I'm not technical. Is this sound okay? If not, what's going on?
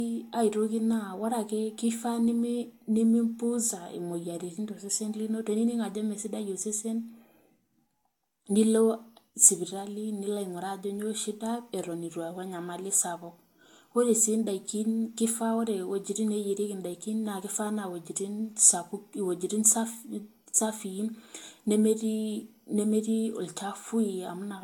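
No, not quite. Throughout the whole recording the speech sounds swirly and hollow, with blurred starts to sounds. That's generation loss, likely from the audio being squeezed into a compressed format about three times over, each pass adding fresh damage.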